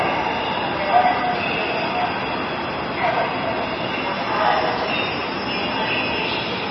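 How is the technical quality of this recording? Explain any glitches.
Quality is poor. Heavy MP3 compression runs throughout: nothing above 5.9 kHz survives, and weak frequency lines flicker frame to frame, sounding watery and swirly, likely from a very low bitrate around 24 kbps.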